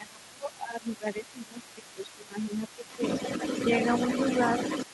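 From 0.0 to 3.02 s the echo canceller likely failed to tell the talker apart from the far end during double talk, so it turned both down: speech suppressed in double talk. The voice dips and breaks up for about two seconds in total, at its deepest falling roughly 15 dB.

Across the whole clip, 0.0 to 4.93 s, residual loudspeaker echo likely escaped cancellation at the microphone, giving the other side's voice leaking through. That second voice sits only slightly below the talker's level.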